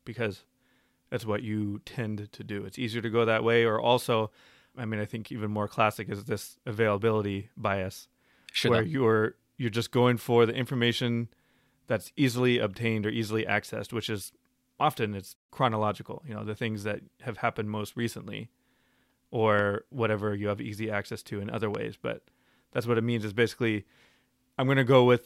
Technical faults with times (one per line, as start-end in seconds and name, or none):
19.59-19.61 loud pop
21.75-21.77 loud pop